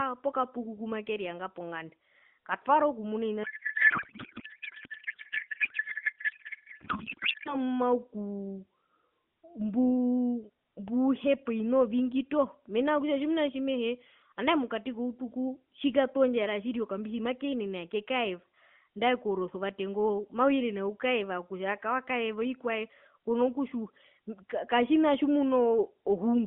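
From 3.44 to 7.57 s, a codec payload misread: octet-aligned AMR frames are unpacked as bandwidth-efficient, replacing the speech with garbled warbling noise that barely tracks it.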